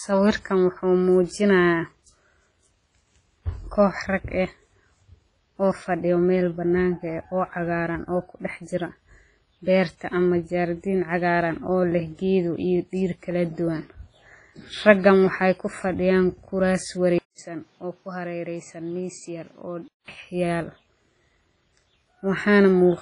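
Throughout, there's heavy smeared, washy ringing with nothing above 10.3 kHz, likely WMA compression at a low rate, something around 24 kbps. At 17.18 s a 200 ms gap opens, then the speech drops roughly 10 dB, dulls to nothing above 8.2 kHz, and gains new noise, likely an input switched to a poorer device, until 20.08 s.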